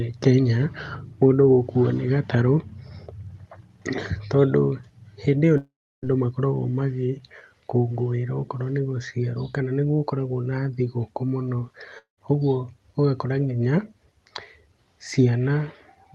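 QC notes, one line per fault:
5.57–6.04 s and 11.98–12.19 s, long network dropout: after "hĩndĩ ĩyo" and "gũkoragwo na thigũkũ mũno", a fading buzz gives way to near-silence, likely lost packets, and speech resumes with the missing stretch gone.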